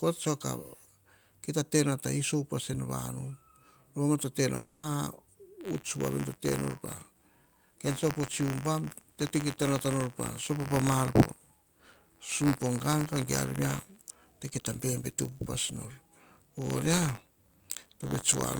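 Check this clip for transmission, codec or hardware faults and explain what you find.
Two faults are audible in this speech clip.

Long network dropout, 4.55 to 4.85 s: about 280 ms of speech never arrived, likely through packet loss; the receiver stretched the last sound into a fading buzz with no silence.

Buffer tearing, 5.6 s to the end: writer and hardware pointers cross each period, splicing a small slice of audio about 30 ms old into each buffer, giving a 93.8 Hz rattle that fits a 512-sample buffer.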